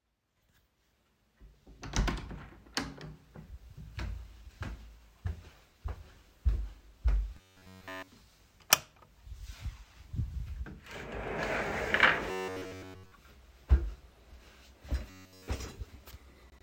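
A recording of everyday sounds has robotic sound from repeated short buffers in three places: 7.37 to 8.11 s, 12.31 to 13.12 s and 15.10 to 15.48 s. In each, the audio becomes a rigid metallic buzz near 93.8 Hz, a pitch that matches a segment of about 10.7 ms being looped. The first and last passages are entirely replaced by repeats, and the middle one mostly. The likely cause is audio arriving too late, with playback repeating the last short buffer to fill the gaps.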